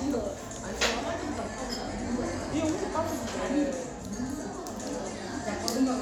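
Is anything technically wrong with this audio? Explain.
No, nothing technically wrong can be heard anywhere in this audio.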